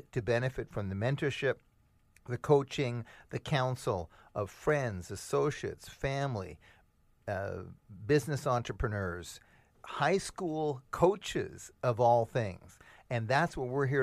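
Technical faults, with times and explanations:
No technical faults are heard in this speech clip.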